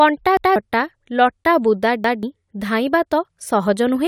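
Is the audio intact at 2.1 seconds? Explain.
No. From 2.04 to 2.23 s there is a repeated buffer: fresh audio did not reach the output in time, so the device replayed its previous block once more. The span of about 186 ms fits an 8192-sample buffer. The result is a stutter, the same fragment of speech heard twice with an abrupt seam, and about a fifth of a second of real speech is skipped. Unlike a dropout, the gap is filled with duplicated audio, not silence.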